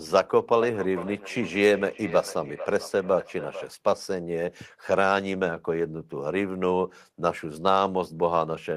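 A speech clip where, from 0.61 to 3.7 s, each phrase returns about half a second later as a ringing repeat, peaking about 13 dB below the speech. This is feedback echo between two devices: one device replays the other's microphone feed, which picks it up again, beyond either echo canceller's reach.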